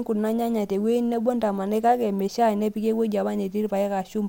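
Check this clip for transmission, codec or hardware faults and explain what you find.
Nothing stood out on listening to this speech clip.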